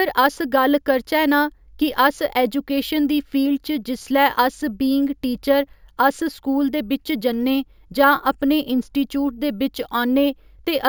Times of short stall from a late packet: none

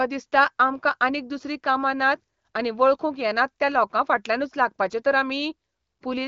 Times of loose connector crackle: none

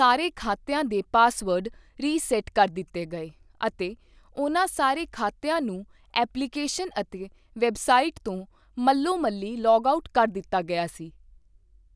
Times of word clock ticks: none

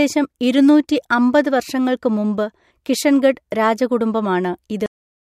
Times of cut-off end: 4.86-5.33

